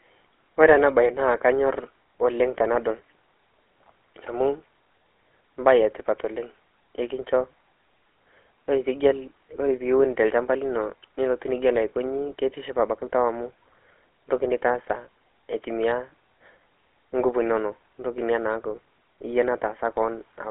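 From start to finish the speech carries the sound of the GSM full-rate codec, and the damage is plainly audible. The codec rebuilds speech from a vocal-tract model fed by a sparse, regular pulse train, which leaves that gravelly, buzzy grain on the voice. The line band runs from 250 Hz to 3.4 kHz, with nothing above 3.7 kHz, so it sounds thin and boxed-in, and it fits the old 13 kbps full-rate mode.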